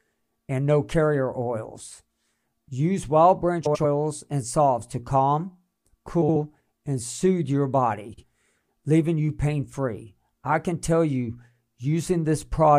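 Frames out of order at 3.65–3.84 s (before "and salves to calm"), 6.22–6.36 s (before "and soothe your") and 8.13–8.23 s (after "and soothe your"). Adjacent blocks of about 93, 70 and 46 ms play swapped, giving a garbled flutter. A spectrogram shows discontinuities at three joins, and the waveform has abrupt steps there.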